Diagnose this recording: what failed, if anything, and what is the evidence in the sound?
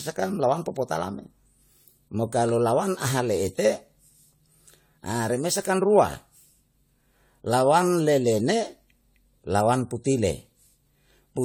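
Codec stage, throughout the speech: a swirly, hollow, smeared sound with blurred attacks, worse than one pass at what fits 96 kbit/s AAC-LC. Likely generation loss from around ten re-encodes on shifting frame grids, compounding errors. Spectrograms show flickering holes below 20 kHz and smeared onsets.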